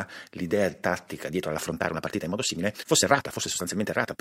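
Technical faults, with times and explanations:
1.26 s to the end at 4.21 s, time-stretched section: the speech suddenly rushes ahead at about 1.7 times its earlier pace while the pitch stays put. That's likely software squeezing the audio by dropping short slices to keep the pitch unchanged.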